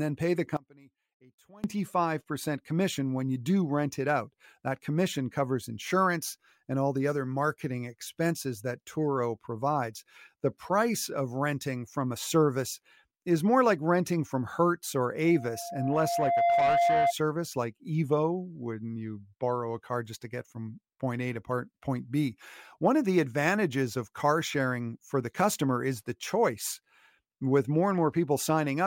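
A speech recording in which, from 0.57 to 1.64 s, the sound suddenly collapses by about 25 dB into a faint residue. The likely cause is one channel inverted: with one stereo side's polarity reversed, everything common to both sides cancels when they are summed to mono. From 15.25 to 17.14 s a steady 690 Hz tone swells over roughly a second into a squeal that ends up a little louder than the speech. This is loudspeaker feedback squeal, where the microphone picks up its own loudspeaker and that frequency runs away around the loop.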